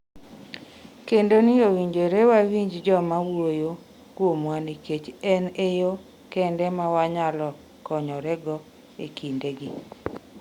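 No technical faults can be heard in the signal at any point in the recording.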